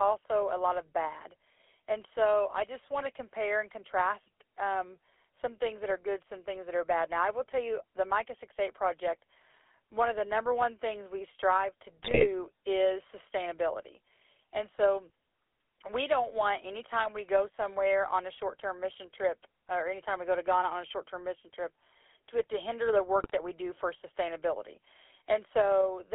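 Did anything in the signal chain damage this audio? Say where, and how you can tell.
Yes. At the codec stage, the whole clip has been through the GSM full-rate codec. Its coarse pulse excitation of a vocal-tract model gives the speech a constant buzzy, gravelly roughness. The band sits at about 300 Hz to 3.5 kHz, which fits a 13 kbps full-rate coder.

On the radio link, GSM bit errors reached the decoder at 12.03 to 12.28 s, between "things we strive to" and "is sustainability", and at 23.17 to 23.31 s, between "it to hinder the" and "that we do for". Flipped filter, pitch and gain values warp the spectrum and jolt the level frame by frame, so the sound breaks into squawks, pops and gargling, as on a weak link.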